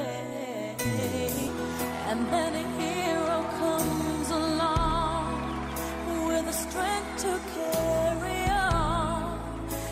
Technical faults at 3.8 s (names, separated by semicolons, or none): none